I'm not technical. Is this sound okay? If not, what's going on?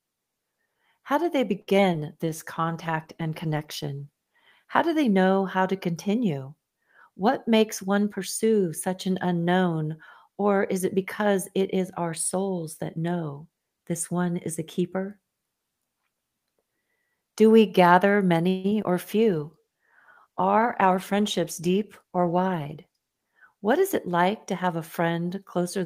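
No, this recording has several call-quality problems.

From 1.61 to 1.96 s there is repeated packet loss (robotic sound). Four small chunks of the audio went missing in quick succession, and each hole was patched by stretching the sound just before it. The result is a choppy stutter. What sets it apart from a single dropout is the rapid run of several holes in about a third of a second.

A call bitrate drop runs from 2.26 to 5.91 s and again from 19.25 s up to "to have a", ending at 24.35 s. The connection told the sender to squeeze the audio much harder, so it sounds muffled, rough and watery. Unlike a dropout, nothing goes missing. The sound stays continuous but dull for several seconds, then clears up.

There are two jitter buffer speed-ups: 7.47 to 8.05 s, just before "pursue such an unknown", and 20.58 to 22.19 s. The receiver had built up too much waiting audio and trimmed tiny slivers to catch up. 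That removed less than a tenth of a second in the first stretch and roughly 0.15 s in the second. The talking sounds hurried, about 8 to 10 percent faster, but the pitch doesn't rise, which is what distinguishes it from a sped-up tape.

Right after "we gather", from 18.49 to 18.66 s, there is a call audio freeze. The last sound hangs as a brief fading buzz for about 0.16 s, and then the speech carries on exactly where it left off. The likely cause is packets held up in transit. Unlike packet loss, nothing is missing here. A pause has simply been inserted.

Just after that, two short concealed packet losses fall at 18.70 to 18.73 s and 18.83 to 18.86 s. Each is a tiny smear or wobble where a few hundredths of a second never arrived and were papered over. These are single, very brief blips, far shorter than the robotic stretch at the start, and a small sound can vanish in them.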